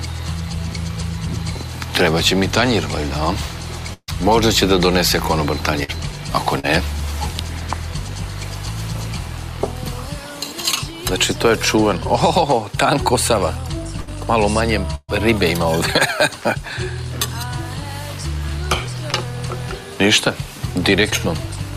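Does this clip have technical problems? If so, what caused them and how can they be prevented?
Yes. There are bursts of packet loss at 3.93 to 4.10 s, 5.84 to 5.90 s, 14.01 to 14.09 s and 14.95 to 15.10 s. Between 40 and 140 ms of audio never arrived. The receiver stretched the last sound and let it fade. The two longest bursts end in brief silence, about 40 and 20 ms, before the sound resumes further on. A larger jitter buffer and forward error correction on the network path would prevent these.

There are also short concealed packet losses at 6.60 to 6.65 s, 19.10 to 19.14 s and 21.10 to 21.14 s. About 40 ms went missing in the first and 20 ms in each of the others. The decoder filled each hole by extending the preceding sound, then blended back in. The result is a quick smear or wobble. Redundant packet coding and a steadier connection would prevent these.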